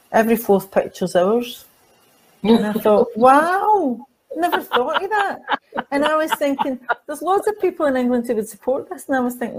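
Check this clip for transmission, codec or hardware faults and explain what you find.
A sudden gain jump at 3.40 s drops the level by about 4 dB, and it stays at that lower level until the end of the clip. The step happens between one sample and the next with no fade, most likely because a gain setting or bit shift was applied instantly instead of being ramped. Because the change is applied digitally to the whole signal, the sound and its background noise fall together, so the noise floor drops in step with everything else.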